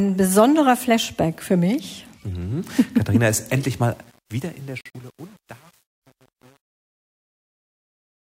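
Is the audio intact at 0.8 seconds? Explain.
Yes, the audio is intact at 0.8 seconds, with no fault present at that moment.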